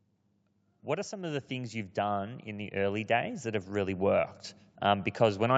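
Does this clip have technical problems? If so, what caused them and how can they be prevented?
Yes. From 0.85 s to the end, the speech and the background swell together steadily. This is automatic gain rising: the gain control judged the input too quiet and kept raising its gain. Setting a fixed microphone gain, with AGC disabled, prevents it.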